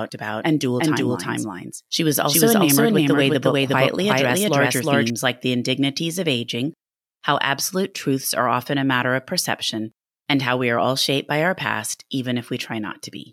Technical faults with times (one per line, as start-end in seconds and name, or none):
0.00-5.10 doubled audio track